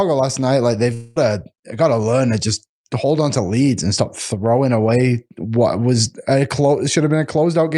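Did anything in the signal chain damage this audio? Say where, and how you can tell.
Yes. From 0.93 to 1.18 s the speech smears into a fading buzz that extends the preceding sound, then resumes at "got to learn to" with about 220 ms of material gone. This is likely a long network dropout, with the receiver's concealment filling the missing packets.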